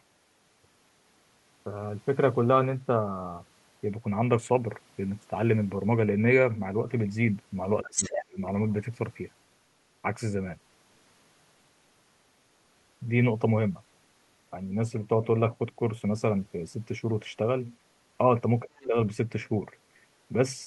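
Around 7.83 s the talker's speech gets pushed down hard for roughly half a second, up to 8.38 s, with the deepest dip near 30 dB and somewhere around 0.4 s of it actually affected. That's speech suppressed in double talk: both ends were talking at once, and the echo canceller most likely couldn't tell the local voice from the loudspeaker echo, so it ducked everything. At almost the same moment, 7.85 to 8.25 s, you hear the other side's voice leaking through, sitting only a little below the talker. That's probably loudspeaker pickup the canceller didn't fully strip out.

Later there's a shorter repeat. From 18.63 to 18.96 s the speech dips again, around 20 dB at its worst and for roughly 0.3 s in total, which fits the same double-talk suppression. Inside that stretch, from 18.79 to 18.86 s, there's a brief, faint scrap of the far side's voice leaking through. It's well under the talker, which points to a little residual echo that likely slipped past the canceller.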